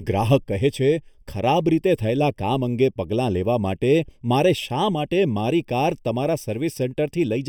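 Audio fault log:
Throughout, channel delay (comb filtering): one channel arrives roughly 0.4 ms late, and summing to mono cancels shared content at evenly spaced frequencies. The first notch falls around 1.5 kHz, with more repeating above it, leaving the speech hollow and phasey.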